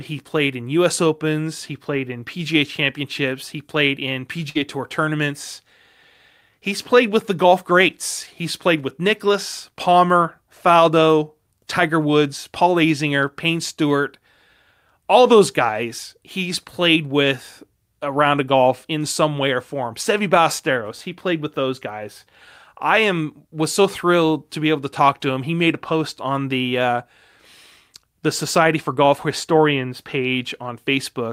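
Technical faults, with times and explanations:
4.49–4.57 s, burst of packet loss: 54 ms gap filled by stretching and fading the last sound, 60 ms skipped; spectrogram shows smeared decaying band, then abrupt jump.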